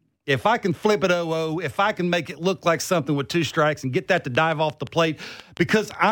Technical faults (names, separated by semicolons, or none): train of clicks